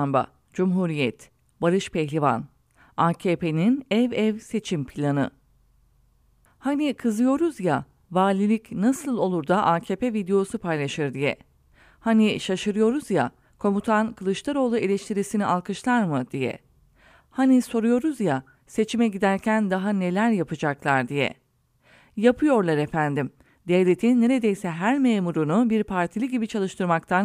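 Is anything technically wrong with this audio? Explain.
No, nothing in this recording sounds technically wrong.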